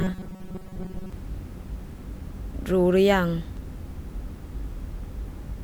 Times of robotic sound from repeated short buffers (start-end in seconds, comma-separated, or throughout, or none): 0.01-1.13